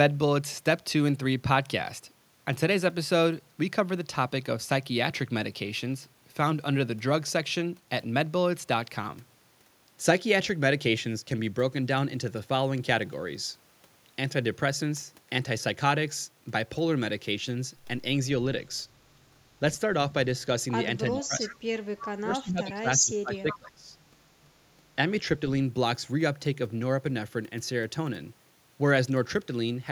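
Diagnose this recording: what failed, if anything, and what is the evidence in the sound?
In the call processing, the echo canceller likely treated overlapping talk as echo and attenuated it. Speech suppressed in double talk appears from 21.12 to 21.8 s and from 22.19 to 23.96 s, where the speech dips by roughly 25 dB at its deepest and partly drops away.

The same canceller is also likely letting through part of what the far loudspeaker feeds back into the microphone. That echo leak shows up as brief copies of the speech delayed by 330 ms at 21.44 to 21.56 s, 21.99 to 22.05 s and 23.51 to 23.58 s, about 20, 15 and 10 dB below the speech.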